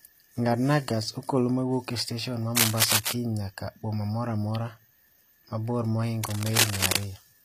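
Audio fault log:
throughout, HE-AAC compression: The treble of the speech sounds rebuilt rather than recorded. S sounds come out gritty, metallic or lispy, and the damage is plainly audible. This is likely HE-AAC coding, which fits a low bitrate around 24 kbps. Only the lower band is coded, and the top is filled by copying lower bands upward under a coarse envelope, so the harmonics don't line up across the crossover. Unlike plain low-bitrate AAC, the treble still reaches high but sounds synthetic instead of dull.
2.56 to 3.13 s and 6.23 to 7.03 s, cable scratch noise: Dense, uneven bursts of scratching and rustling sit over the speech. In the first burst the noise is a little louder than the speech, and in the second it is about as loud. The likely cause is a worn cable, connector or control carrying a DC voltage being moved, so its contact resistance jumps rapidly. Unlike isolated clicks or steady crackle, it arrives as short irregular flurries tied to the movement.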